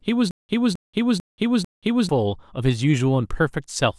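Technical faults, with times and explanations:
0.31 to 2.09 s, stutter with silent gaps: the speech catches on a burst of about 265 ms that plays four times, each followed by about 181 ms of dead digital silence, so the same fragment returns every 445 ms in an even stammer before the audio moves on. This most likely comes from playback stalling, with each retry replaying the last buffered fragment and then running dry, so whatever should have filled that span is gone.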